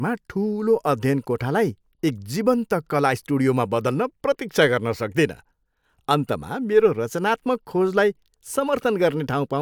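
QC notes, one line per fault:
Nothing to flag here; I listened all the way through and didn't catch a single problem worth a QC line.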